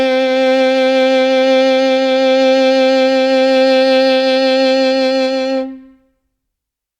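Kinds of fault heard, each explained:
No faults can be heard anywhere in this music clip. There is nothing to list under any kind of fault.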